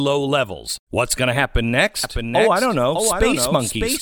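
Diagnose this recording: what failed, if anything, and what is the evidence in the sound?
A doubled audio track enters abruptly at 2.04 s and runs to the end: a full-band copy of the speech trails by roughly 0.7 s, about 5 dB quieter, with no decay or room colour. The likely cause is a second, slower capture path or an edit holding two offset copies.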